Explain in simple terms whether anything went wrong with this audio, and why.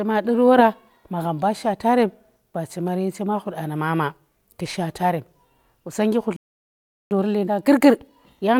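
The speech cuts to silence at 6.36 s and stays quiet for about three quarters of a second, until 7.11 s. This is a playback stall. The player likely ran out of data.

From 7.11 s to the end, the speech runs about 1.15 times faster at normal pitch. This is time-compressed catch-up, where the player trims tiny pieces to make up the lost time.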